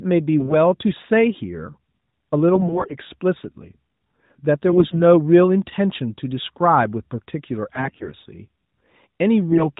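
Speech over an AMR narrowband link, band-limited to 4 kHz and fairly clean, which fits the 12.2 kbps mode. AMR bit errors make it briefly hoarse and gargly at 0.40–0.56, 2.54–2.95, 4.68–4.99, 7.74–8.12 and 9.49–9.71 s. Flipped low-priority bits scramble pulse placement and fine gain and spectrum values, while pitch and level roughly hold.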